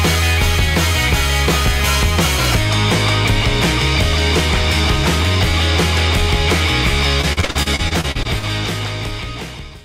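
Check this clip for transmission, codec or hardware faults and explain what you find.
One transmission fault: repeated packet loss (robotic sound), 7.21 to 8.45 s. About a dozen short dropouts, the longest 42 ms, are each patched by extending the previous sound, leaving choppy audio.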